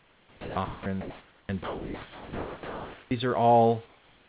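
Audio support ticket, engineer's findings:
Sound dropped by the voice detector, 0.00–0.56 s. About 210 ms of real sound missing, replaced by steady noise. Likely the sender's voice detector classed it as background and stopped sending.

Sound dropped by the voice detector, 0.65–0.86 s. Roughly 120 ms lost under flat noise. Same likely detector misjudgement.

Sound dropped by the voice detector, 1.64–3.11 s. Longest gap. About 920 ms of sound lost, filled with featureless noise until transmission resumes. Likely the detector holding off too long.

Comfort noise in place of the background, 1.01–1.49 s. Room background, about 34 dB below the loudest speech, swapped for smooth synthetic noise. Level about 1 dB up. Likely discontinuous transmission during a pause.

Comfort noise in place of the background, 3.86 s to end. Background about 33 dB down, replaced by flatter noise about 4 dB quieter. 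Likely the same pause-filling mechanism.

Onset clipped by the voice detector, 1.45–1.49 s. First 40 ms of the returning speech missing. Word starts abruptly, no soft attack. Likely slow detector trigger, with comfort noise covering the gap.

Call path is band-limited, nothing above 4 kHz, which fits a narrowband call codec. Room noise is about 32 dB below speech.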